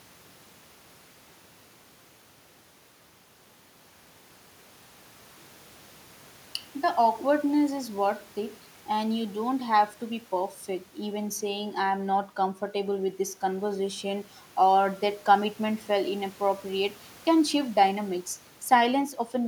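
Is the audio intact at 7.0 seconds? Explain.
Yes, the speech at 7.0 seconds plays through intact, with no dropout, click, distortion or other fault audible at that moment.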